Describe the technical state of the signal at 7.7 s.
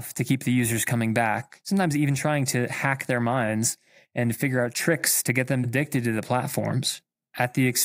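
At 7.7 s the speech is affected by a block size mismatch (truncated), present throughout the clip. One stage writes blocks slightly longer than the next stage reads, and the tail of each block is discarded. That leaves a small discontinuity at every block boundary, heard as a steady buzz at about 46.9 Hz, which fits 1024-sample blocks. The sliver lost per block is tiny, so the speed stays at 1.0x with normal pitch. The buzz's fixed rate sets it apart from random dropouts.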